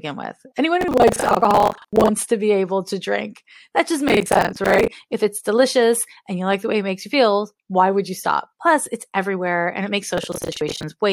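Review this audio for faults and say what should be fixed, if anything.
Processor overload crackle: the processor fell behind and missed run after run of its short audio buffers, which sound like roughly 10 ms each. At every miss, a stale fragment of earlier audio was replayed with hard edges instead of fresh sound. Dozens of these in quick succession lay a gritty, tearing crackle over the speech from 0.81 to 2.09 s, 4.08 to 4.88 s and 10.18 to 10.83 s. Lightening the processing load or enlarging the buffer would prevent it.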